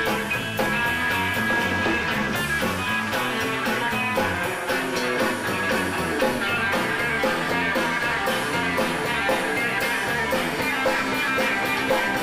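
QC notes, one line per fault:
No technical faults are present anywhere in the signal.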